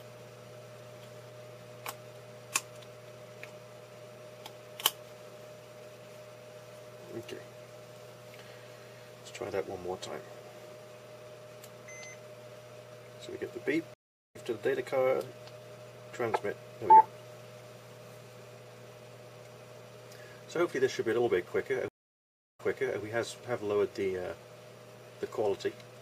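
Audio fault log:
13.94–14.36 s, stream reconnect: the sound cuts out for 395 ms, then picks up about a third of a second further on, so a short stretch is skipped. The connection dropped and a fresh decoder joined the live stream at its current point. Unlike a plain dropout, the audio on either side does not line up.
21.88–22.99 s, stream reconnect: the gap lasts 693 ms, and playback resumes 418 ms earlier, so material just heard repeats. The server resent a burst of audio after the reconnect.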